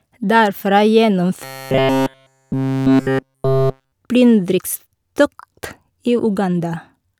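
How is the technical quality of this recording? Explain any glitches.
The recording has one clear fault, robotic sound from repeated short buffers, between 1.44 and 3.92 s, ending just before "plyndringstokt i". Fresh audio was likely arriving too slowly, so playback kept reusing a fragment of about 7.5 ms while the real signal was dropped. Essentially every stretch in that span is a repeat, and the looping imposes a fixed buzz at 133 Hz. The speech becomes a stiff, metallic buzz that only loosely tracks the words.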